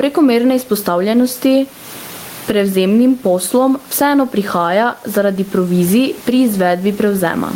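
Speech throughout with gain pumping: the room noise, about 34 dB below the speech, swells by roughly 15 dB in pauses and ducks under each loud syllable, unlike a gate's abrupt cut-off. This likely comes from excessive microphone gain reined in by a fast limiter.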